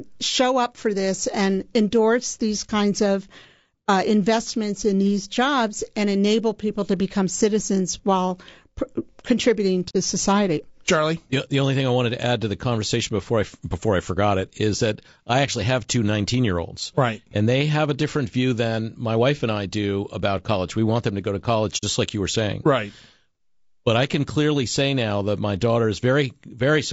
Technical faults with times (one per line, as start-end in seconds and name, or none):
0.00-26.92 low-delay AAC compression
2.66-2.71 AAC frame loss with muting
9.89-9.96 AAC frame loss with muting
21.77-21.84 AAC frame loss with muting